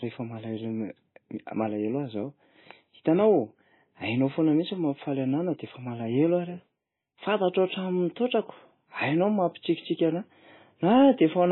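Throughout, the speech carries heavy MP3 compression damage: nothing above 4 kHz, watery swirling detail, and smeared attacks, likely from a bitrate near 18 kbps.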